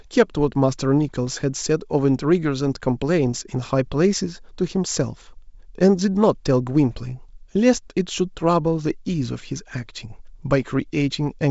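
At 1.27 to 1.29 s and again at 10.63 to 10.68 s there are bit errors on an ADPCM link, carried over what sounds like G.722 wideband coding near its full 64 kbit/s rate. A low error rate, a fraction of a percent, flips bits that throw the decoder's step size and prediction off, so each error rings on briefly. Both events sound like short pops with a rough, gritty burst and a momentary change in level.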